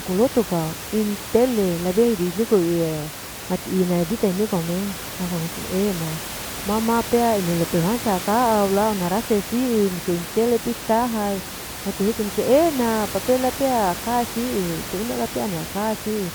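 No technical faults are audible in the speech, with the background room noise sitting about 11 dB below the talker as part of the recorded space rather than anything introduced by the system.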